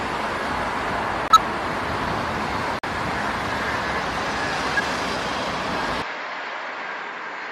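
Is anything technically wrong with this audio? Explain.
Yes, there are three kinds of fault.

At 1.28–1.37 s and again at 2.79–2.85 s the sound cuts abruptly to silence, for about 90 ms and then about 70 ms, while timing continues unbroken. This is a corrupt frame muted: damaged compressed frames were rejected by the decoder and replaced with silence. The hole lengths fit roughly three and two frames.

At 4.75–4.84 s a short chirp, blip or burst of noise peaking at about −10 dBFS cuts across the audio. This is a corrupt frame decoded: a run of damaged frames, around five, was played anyway, so misread values scattered energy into the wrong frequencies.

From 6.02 s to the end the sound turns duller and about 5 dB quieter, with nothing above 7.6 kHz and a new noise floor roughly 40 dB below the signal. There is no gap at the change, which most likely comes from the input switching to a poorer device.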